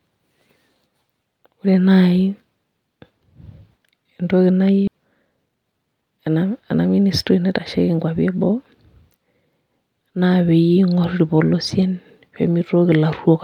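At 4.87 to 4.89 s the speech has a skip ahead. Roughly a second and a half of audio never plays. It was either lost in transit or discarded by the jitter buffer while later audio was already queued. Nothing fills the hole: the speech before and after the jump is butted together with no silence, so the listener hears an abrupt splice mid-flow, and the delay drops by about that same amount.

Immediately afterwards, from 4.91 to 6.77 s, a jitter buffer speed-up follows. The receiver's buffer was still holding more audio than its target. To drain the excess, it repeatedly cut out short slices one or a few pitch periods long, removing about 0.4 s in total. The speech plays at about 119% of normal rate while the pitch stays unchanged, so this stretch sounds rushed and clipped rather than higher.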